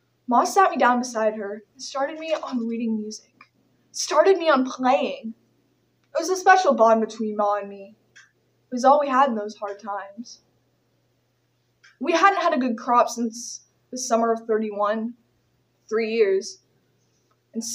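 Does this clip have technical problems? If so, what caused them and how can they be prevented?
No, nothing in this clip points to a technical problem, so there is no cause to trace and nothing to prevent.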